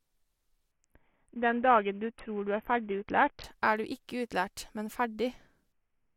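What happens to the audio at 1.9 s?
At 1.9 s the speech is inside a Bluetooth SBC bit pool drop lasting from 0.71 to 3.44 s. The sound points to the bit pool falling from 31 to about 5, near 50 kbps. Upper sub-bands are starved, so the treble dulls and gritty noise rises. A spectrogram shows the high bands emptied and a grainy noise floor.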